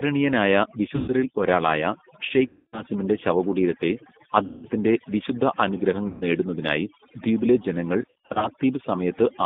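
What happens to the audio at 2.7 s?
VoIP packet loss concealed by the speech codec occurs from 2.47 to 2.82 s. About 260 ms of packets went missing, so the decoder stretched its last pitch and filter with falling gain, giving a buzzy, fading tone that stays weak briefly after recovery. The G.729 codec effect runs through this moment as well. The sound is band-limited to 150 Hz to 3.6 kHz, which fits an 8 kbit/s G.729A stream, and it has a rough, synthetic texture. The overdone noise removal also continues here, leaving near-silent gaps with twinkling specks.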